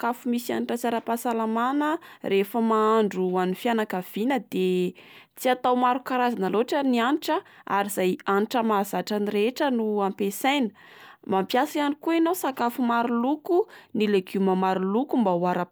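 No technical faults are audible anywhere in the speech recording.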